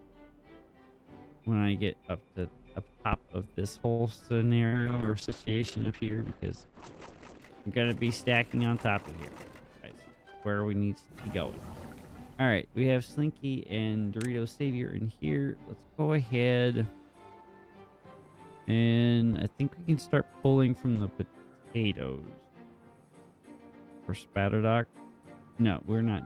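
A phantom power thump hits at 3.13 s and again at 19.33 s: a deep low-frequency knock dying away within about 43 ms and 64 ms, as a supply switched on a live input sends its voltage step through the coupling capacitors. A short stall from a late packet follows at 3.91 to 4.02 s. The receiver holds the last sound for 77 ms while its jitter buffer waits empty, then carries on from the same point, so nothing is lost but playback now runs 77 ms later. A burst of packet loss at 4.66 to 4.75 s does lose material: 62 ms of continued, fading sound covers the gap, and the audio resumes 60 ms further on than where it stopped. Right on top of that, a call bitrate drop from 4.73 to 8.56 s takes the encoder from 32 kbps down to 9 kbps after the bandwidth estimate falls. The sound turns coarse and muffled, its top end cut from 20 kHz to 8 kHz, and it sits at the lowest rate for about 2.2 s before recovering. 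A jitter buffer speed-up then runs from 9.62 to 10.33 s, where the receiver trims short pitch-period slices to work off surplus buffered delay. Around a tenth of a second goes, so the audio plays at 112 % speed without any pitch change and sounds rushed.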